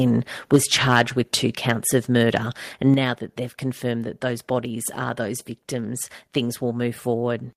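A speech recording with a single abrupt level change: at 2.94 s the whole signal, voice and room noise together, drops by about 6 dB in one step, just before "now that they've confirmed", and stays at the lower level. This is a microphone volume step-down, most likely the call software's automatic gain control reducing the device's input volume at the source, so everything captured after that instant arrives quieter rather than being attenuated later in the chain.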